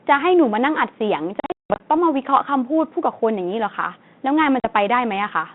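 At 1.4 s the speech drops into packet loss on an ADPCM call: roughly 300 ms goes missing in hard-edged silent holes scattered through to 1.83 s, the longest about 180 ms, which sounds like around fifteen packets. Each time sound resumes, the decoder's predictor and step size have drifted from the sender's, so it comes back slightly distorted before settling. A shorter 40 ms gap at 4.6 s, about two packets, does the same thing, all over a lightly coded G.726 line band that sounds like 32 kbit/s.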